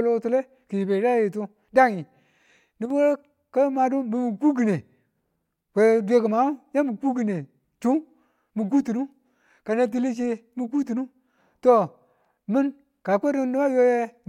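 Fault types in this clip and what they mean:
One channel drops out: from 2.85 to 2.90 s the speech suddenly dips by about 6 dB and comes straight back. The likely cause is one stereo channel briefly going silent, so the mono mix loses half of its shared signal.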